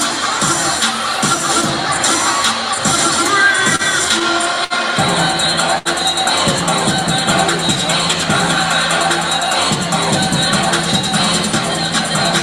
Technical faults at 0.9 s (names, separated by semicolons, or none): none